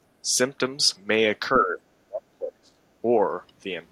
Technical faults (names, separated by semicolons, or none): speech suppressed in double talk